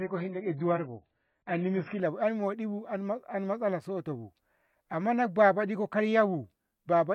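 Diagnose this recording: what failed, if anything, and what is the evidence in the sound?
Playback stage, adaptive stream starting at a low bitrate: until 2.0 s nothing above 5.6 kHz and stronger codec artefacts. Quality then jumps cleanly with no gap, unlike a dropout.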